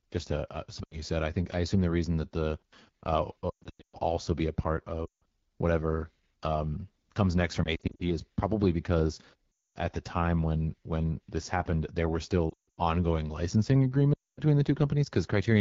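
Throughout, the speech sounds rough and raspy, with a noisy sheen on the highest frequencies. This is the AMR wideband (HD Voice) codec running at 8.85 kbit/s, one of its lowest rates. It models the vocal tract coarsely up to 6.4 kHz and fills the band above that with shaped noise.

From 0.84 to 1.03 s, between "just a uh uh" and "said I think I", the speech briefly drops to near silence. The same happens at 3.50 to 3.99 s, 5.05 to 5.23 s, 7.64 to 8.03 s (after "whatever um comes next", before "is probably because"), 9.52 to 9.78 s, 12.49 to 12.79 s (between "this happened there were" and "ongoing licensing"), and 14.14 to 14.41 s. Each time the sound drops to near silence within two frames, then returns weak and rough. These are lost AMR speech frames. The decoder conceals the missing audio by repeating the last good pitch and vocal tract settings at falling gain. The gaps range from 80 to 360 ms. 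At 3.50 s, 7.64 s and 12.49 s the losses are scattered in short runs, which gives a stuttering warble rather than a single fade.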